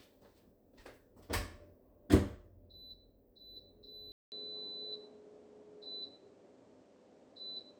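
At 4.12 s there's a gap of about 200 ms, and when the sound returns it's a different animal through to the end. Everything above 9.5 kHz is gone, so it sounds duller and boxier, the level shifts by a few dB, and a new noise floor sits roughly 40 dB under the signal. That combination is the classic signature of an input switched to a poorer device, most likely the system hopping to another mic or a headset's call profile mid-take.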